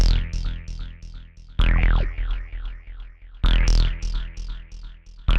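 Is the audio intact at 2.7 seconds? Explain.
Yes, the audio at 2.7 seconds is intact, with no dropout, click or other fault to be heard there.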